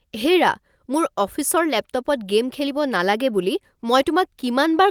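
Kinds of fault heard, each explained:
No audible faults detected.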